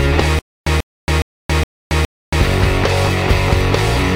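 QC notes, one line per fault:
0.39–2.40 s: stutter with silent gaps. A 139 ms burst repeats five times with 276 ms of digital silence between, likely a stalled stream replaying its last fragment.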